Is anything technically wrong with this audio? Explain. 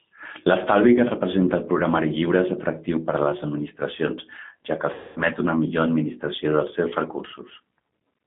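Yes. Throughout, the G.729 codec at 8 kbit/s rebuilds speech from a filter and sparse pulses within a 150 Hz to 3.6 kHz line, leaving it band-limited, rough and slightly synthetic.

From 4.94 to 5.20 s, after "administracions ja que", VoIP packet loss concealed by the speech codec removes about 220 ms, which fits roughly 11 packets. The decoder extrapolates a fading buzzy tone or coloured noise, and the voice stays weak or distorted entering "una millor".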